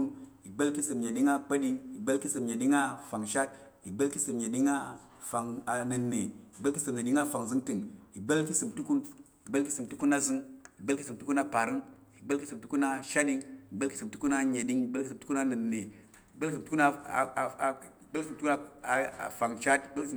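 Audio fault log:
No faults are audible anywhere in this speech recording.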